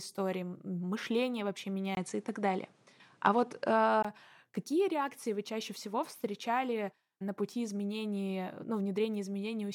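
After "мышление вообще", at 1.95 s, a 20 ms gap opens a duller stretch, a few dB different in level and with new hiss about 35 dB down. The input likely switched to a poorer device. A spectrogram shows nothing above 11.4 kHz until 4.05 s, before "какие реакции вы чаще".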